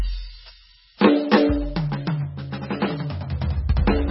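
A short piece of music sounds dull, watery and swirly from start to finish, with nothing above about 5.6 kHz, smeared attacks and thin detail. This is likely heavy MP3 compression at a very low bitrate, around 18 kbps, cutting the treble and dropping weak frequency lines.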